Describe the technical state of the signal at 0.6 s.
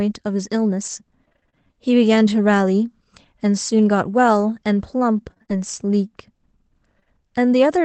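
At 0.6 s the signal is intact, with no fault present, only the ordinary coding character of the WebRTC call path and its upper band ending at 8 kHz.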